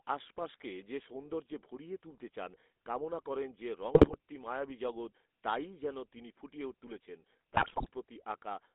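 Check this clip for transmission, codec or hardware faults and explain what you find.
The speech carries GSM full-rate codec damage throughout, plus two bursts of GSM bit errors.

GSM full-rate codec: across the whole clip the voice sounds buzzy and gravelly. The codec rebuilds speech from a vocal-tract filter excited by a sparse, regularly spaced pulse train, which coarsens the voice's texture. A spectrogram shows the energy confined to roughly 250 Hz to 3.6 kHz, with blank space above. The sound fits a 13 kbps GSM full-rate stream.

GSM bit errors: from 3.94 to 4.16 s and from 7.54 to 7.89 s, the voice breaks into squawks, pops and gargling. Corrupted filter, pitch and gain values make the decoder bend the spectrum or overshoot the level one frame at a time. The waveform shows sudden amplitude spikes, and the spectrogram shows smeared, blocky frames.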